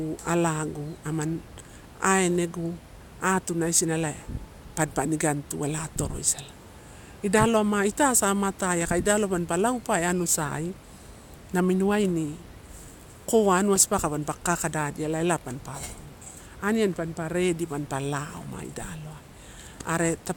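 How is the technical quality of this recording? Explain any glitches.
No glitches or technical faults can be heard here.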